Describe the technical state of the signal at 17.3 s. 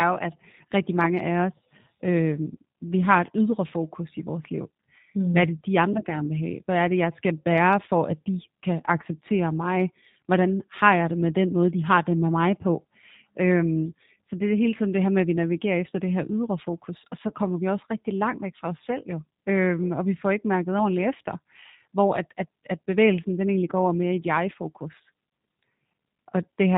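At 17.28 to 17.32 s, a VoIP packet was lost and the G.729 decoder's packet loss concealment filled the gap, which fits a single missing 20 ms packet. It extended its last pitch and filter at falling gain, so the speech briefly smears into a buzzy tone or coloured noise before recovering.

Underneath, the whole signal runs through the G.729 codec at 8 kbit/s. It rebuilds speech from a vocal tract model and sparse pulses, cutting everything above 4 kHz and leaving plainly audible roughness and a slightly synthetic, muffled quality.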